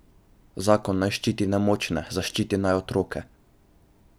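No technical faults can be heard in this recording.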